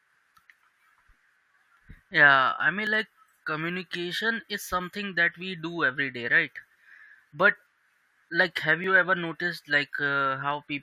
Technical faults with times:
2.87 overlap between stream segments
8.84 overlap between stream segments

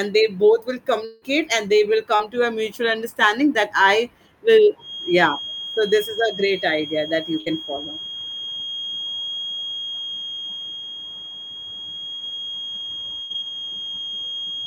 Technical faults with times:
1.05-1.24 long network dropout
2.16-2.21 short concealed packet loss
4.77-14.66 feedback whistle
7.39-7.48 burst of packet loss
12.16-12.22 short concealed packet loss
13.22-13.32 burst of packet loss

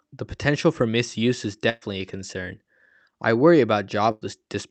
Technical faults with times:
1.69-1.83 burst of packet loss
4.11-4.23 burst of packet loss

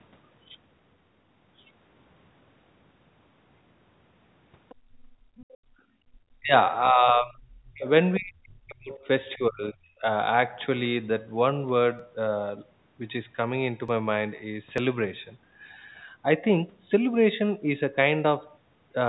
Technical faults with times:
4.69-4.75 other side's voice leaking through
4.75-6.09 background gated by the echo canceller
5.37-5.46 other side's voice leaking through
6.37-7.87 speech suppressed in double talk
8.18-9.08 speech suppressed in double talk
9.35-10.06 speech suppressed in double talk
11.99 dropped samples
13.88 dropped samples
14.78 dropped samples

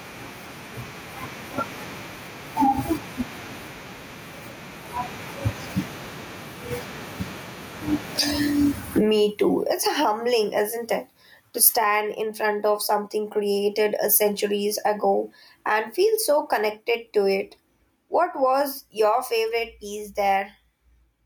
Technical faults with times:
0.00-21.25 gain pumping

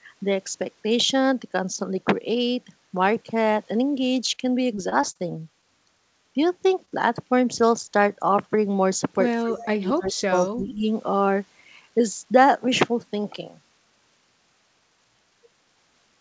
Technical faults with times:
4.26-5.21 repeated packet loss (robotic sound)
6.85-6.94 short concealed packet loss
9.42-10.82 speech suppressed in double talk
9.50-9.63 echo leak
10.34-10.48 echo leak

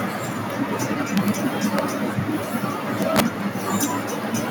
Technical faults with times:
1.17-1.28 integer overflow
1.79 integer overflow
3.02-3.20 integer overflow
3.83 integer overflow

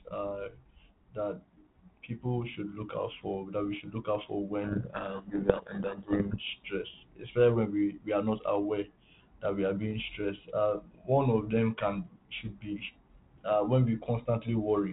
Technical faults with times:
4.64-6.39 codec payload misread

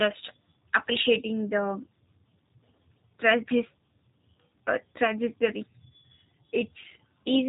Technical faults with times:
0.00-7.48 G.729 codec

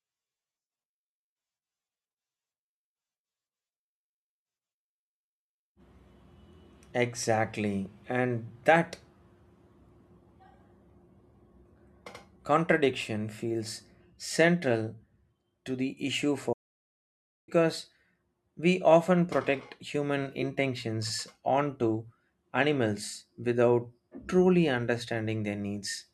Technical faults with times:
16.52-17.49 playback stall

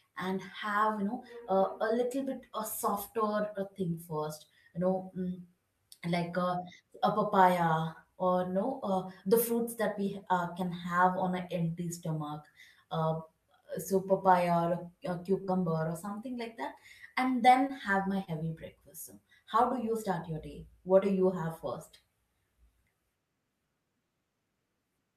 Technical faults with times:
15.41-16.09 repeated packet loss (robotic sound)
17.68-17.71 short concealed packet loss
18.25-18.29 short concealed packet loss

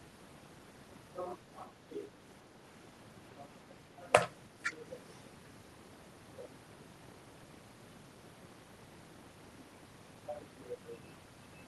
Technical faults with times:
4.62-4.75 echo leak
5.10-5.19 echo leak

